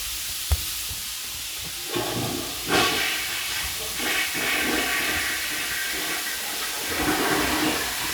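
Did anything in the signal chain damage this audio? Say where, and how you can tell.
No, nothing in the chain damaged this audio.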